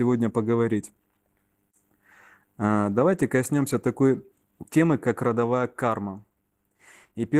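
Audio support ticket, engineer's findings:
Opus voice compression, whole clip, 0 to 7.4 s. Speech plainly degraded: hoarse, slightly robotic, muffled edge. Probable component: encoder set near 16 kbps, consistent with hybrid mode on 20 ms frames. SILK codes the band below 8 kHz with coarse excitation, and a thin CELT layer covers content above it. Spectrogram: smeared, grainy harmonics under 8 kHz; patchy, blocky energy above, changing in 20 ms steps. Waveform: plausible envelope, roughened fine structure.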